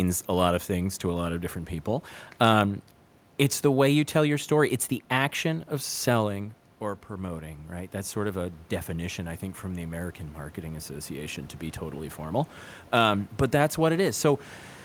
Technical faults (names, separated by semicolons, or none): automatic gain rising